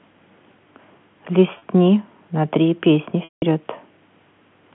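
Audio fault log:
1.58 to 1.62 s, packet loss with pitch repetition: a 40 ms gap, which fits two 20 ms packets going missing. The receiver covers it by replaying the last pitch period, so you hear a brief held, slightly buzzy tone instead of a hole.
3.24 to 3.42 s, packet loss with pitch repetition: a longer 180 ms dropout. The repeated pitch period fades away over roughly the first 50 ms, leaving silence, and then the speech cross-fades back in over the narrow 150 Hz to 3.4 kHz telephone band.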